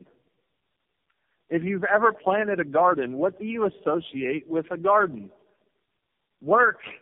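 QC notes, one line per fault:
Throughout, tandem speech coding: the speech sounds like it went through about four speech coders back to back, each re-coding the last one's damage, so it's rough, muffled and warbly, with nothing above 3.7 kHz. The last stage sounds like low-rate AMR-NB.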